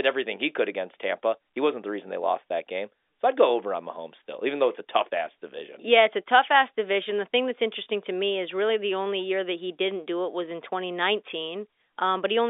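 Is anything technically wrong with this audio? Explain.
No, nothing's wrong here: it's speech carried over an ordinary landline telephone channel, with the narrow 300 Hz to 3.6 kHz band you'd expect from G.711 telephone coding, and nothing in it stands out as a technical problem.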